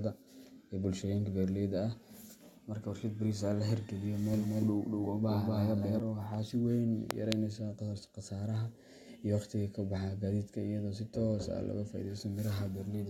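A second, slower capture path or a misaligned edit has likely mixed the speech in twice, producing a doubled audio track from 4.34 to 6.00 s. A full-band copy at about the same level trails roughly a fifth of a second behind, dry and uncoloured, switching on and off abruptly.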